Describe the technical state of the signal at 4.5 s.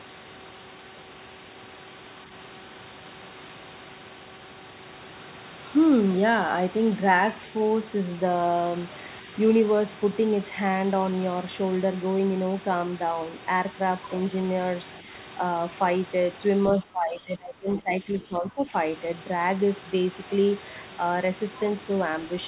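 At 4.5 s the signal is intact, with no dropout, clipping or other fault, only the room noise well beneath the speech and the narrowband call path with nothing above 4 kHz.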